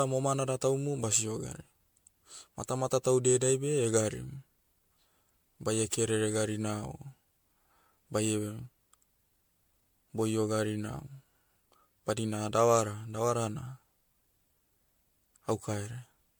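All the way through, the speech has a swirly, hollow, smeared quality with blurred attacks, likely generation loss from around five passes of roughly 96 kbit/s MP3 encoding.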